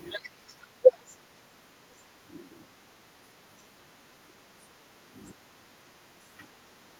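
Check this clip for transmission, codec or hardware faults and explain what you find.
The background is gated by the echo canceller three times: 0.33 to 0.82 s, 1.17 to 1.87 s, and 2.04 to 2.17 s. Each time far-end audio was playing, the canceller pulled the microphone down, so the room tone sinks by about 6 dB and recovers when it releases. On a waveform the noise floor between speech visibly narrows in those stretches; a spectrogram shows the broadband background fading to a paler band, then filling back in.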